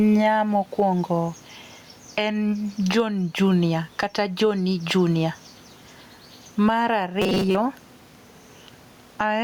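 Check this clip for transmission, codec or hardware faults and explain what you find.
Two faults are audible in this speech clip.

Gain pumping runs through the whole clip. The input gain likely sits far too high, with a fast limiter clamping each loud syllable, so level swings by around 15 dB. Room noise sits about 40 dB below the speech, and the speech sounds squashed.

Robotic sound from repeated short buffers occurs from 7.22 to 7.56 s. New audio likely arrived too seldom, so playback looped the last short chunk for most of that stretch. The loop imposes a rigid, metallic 188 Hz buzz, which fits a buffer of about 5.3 ms.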